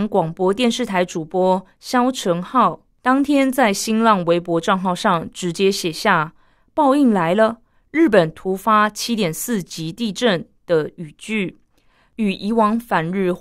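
No technical faults can be heard anywhere in this speech recording.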